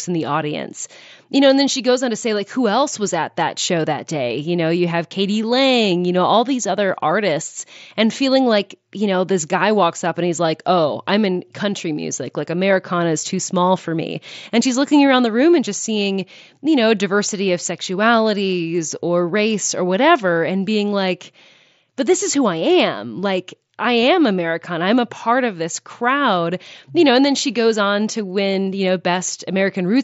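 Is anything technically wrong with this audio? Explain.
No, nothing stood out as technically wrong on listening to this speech.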